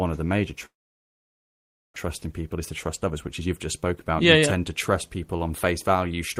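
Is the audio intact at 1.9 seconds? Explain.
No, 1.9 s sits near the end of a long network dropout running from about 0.65 to 1.98 s, right after "of the major". The sound carries on briefly as a fading buzz, then it's essentially silence for most of that stretch, about 1.2 s. The likely cause is that packets stopped arriving and the receiver papered over the gap. When audio resumes, about a second of material is simply gone, with the timing shifted by a few tenths of a second.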